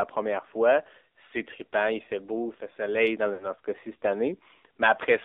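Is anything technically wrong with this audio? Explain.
Yes. Throughout, the audio passes through an AMR narrowband mobile codec at a low bit rate, consistent with the 7.4 kbps mode. The encoder models the voice as a vocal-tract filter driven by sparse pulses, and the band runs only from 300 Hz to 3.7 kHz. The result is thin, plainly buzzy and synthetic speech with nothing above 3.7 kHz.

From 3.34 to 3.47 s, just after "beau il fait soleil", there are lost AMR speech frames. Corrupted frames failed their check, so the decoder carried forward the last good pitch and filter settings while lowering the gain. The sound is smeared and fades for roughly 60 ms, which fits three lost 20 ms frames, and then returns weak or rough for a moment.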